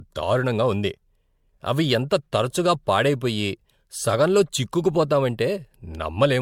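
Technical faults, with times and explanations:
Throughout, generation loss: swirly, hollow speech with blurred attacks, likely from about four MP3 passes near 96 kbit/s, each requantising on a shifted frame grid.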